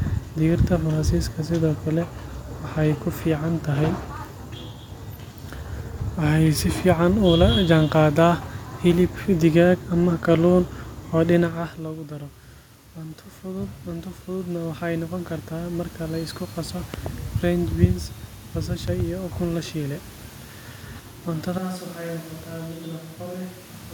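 A speech recording with three kinds of fault. From 12.95 to 16.0 s, just before "la isku qaso", automatic gain rising lifts the level by about 8 dB over three seconds after the input fell by about 15 dB. Unlike the talker's own movement near 11.5 s, the background swells along with the voice. Two loud pops follow, each a quick double pop around 10 dB above the speech: one at 16.94 to 17.08 s, right after "la isku qaso", and one at 18.88 to 19.02 s, just before "ukun la shiilay". The speech carries on underneath them, which marks them as an added voltage spike, likely from a plug, switch or static discharge, rather than a dropout. At 21.58 s the sound abruptly turns hollow and roomy, with less bass and a level about 10 dB lower. Room noise sits only about 25 dB below the voice until the end. Because the change is instantaneous rather than gradual, it points to a switch to a distant microphone, likely after the close microphone failed.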